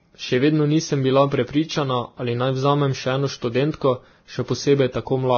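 From start to finish the speech carries transcoding between lossy codecs: nothing survives above 6.5 kHz, and a low-bitrate smear sits under a second layer of codec grit. That likely comes from a very low-rate Vorbis encode re-encoded to WMA, which wasted bits on the earlier damage.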